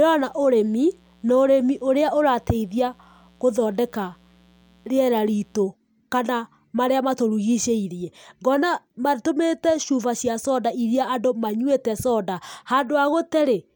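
From 0 to 5.62 s, a mains buzz sits well below the speech, stopping just before "kana marĩa matũrigicĩirie". Spikes twice per 60 Hz cycle leak in as a raspy drone. A spectrogram shows stacked horizontal lines at 60 Hz harmonics reaching several kHz.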